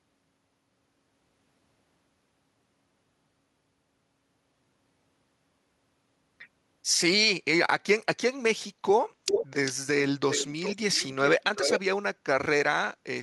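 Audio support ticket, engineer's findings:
Echo leak: speech repeats about 396 ms late at 9.26–9.47, 9.65–9.73, 10.29–10.77 and 11.24–11.8 s, first nearly full level, rest fainter. Likely far-end speakerphone echo canceller passing residue.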